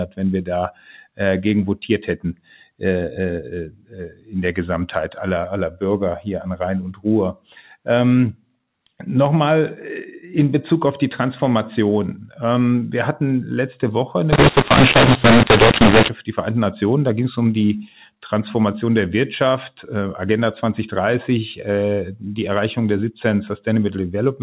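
From 14.33 s to 16.09 s, the speech turns harsh and gritty. This is mu-law and A-law mixed up. The telephone audio was coded with G.711 A-law but decoded here as mu-law. The two logarithmic scales map each 8-bit code to different levels. So sample sizes come out wrong, some too loud and others too soft. Near-silent samples jump well above zero, so the gaps fill with noise. The speech stays distorted.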